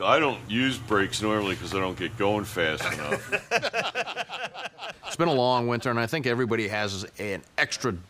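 No technical faults are audible.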